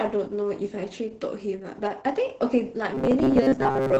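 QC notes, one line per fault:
Throughout: Opus voice compression. The sound is muffled and hoarse, with a coarse, slightly robotic edge. This fits SILK-mode coding at a bitrate around 10 kbps. A spectrogram shows a hard ceiling at 8 kHz and smeared, grainy harmonics below it.
2.95–3.99 s: robotic sound from repeated short buffers. A rigid metallic buzz at 134 Hz runs to the end, most likely because short chunks of about 7.5 ms are repeated while most of the real audio is skipped. A spectrogram shows evenly spaced, flat harmonic lines. The waveform shows closely repeating cycles.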